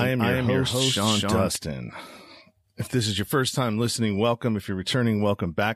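Speech, with a doubled audio track already under way at the start and ending abruptly at 1.56 s: a full-band copy at about the same level trails roughly 300 ms behind, likely from a second, slower capture path. Spectrograms show each syllable repeated, undecayed, one step later.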